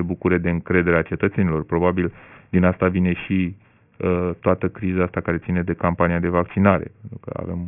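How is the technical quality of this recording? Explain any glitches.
The recording has one clear technical fault, present from start to finish.

Aliasing runs through the whole clip. The speech appears to have been taken down to a much lower sample rate without the filtering that should come first, which fits a drop from 48 kHz to 6 kHz. Anything above the new 3 kHz limit folds back below it as false tones, sitting roughly 20 dB under the speech. Sibilants come out gritty and metallic, and the spectrum stays crowded right up to 3 kHz.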